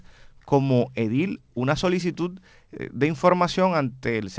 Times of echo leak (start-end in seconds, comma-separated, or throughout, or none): none